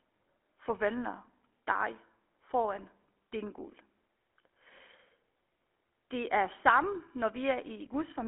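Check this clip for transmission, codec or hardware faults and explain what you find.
One fault runs through the whole recording: GSM full-rate codec damage. The speech is confined to roughly 250 Hz to 3.4 kHz, and the coder rebuilds it as a vocal-tract filter driven by a sparse, regular pulse excitation, which fits the 13 kbps full-rate mode. The result is a plainly audible buzzy, gravelly roughness on every voiced stretch.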